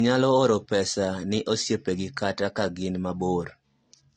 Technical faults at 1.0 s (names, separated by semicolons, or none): low-bitrate audio saved at a high bitrate